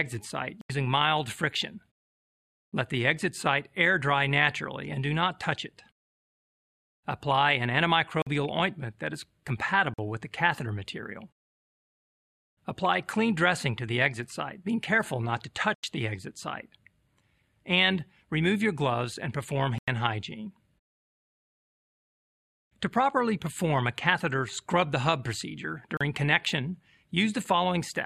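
The audio output likely missed its deadline to fill the buffer repeatedly, and each miss left a block of digital silence: the sound drops to silence with no fade and returns just as abruptly. This happens at 0.61 s (about 83 ms), 8.22 s and 9.94 s (46 ms each, which fits a 2048-sample buffer), 15.74 s and 19.78 s (93 ms each, double that size), and 25.97 s (36 ms). Each is heard as a short, hard hole.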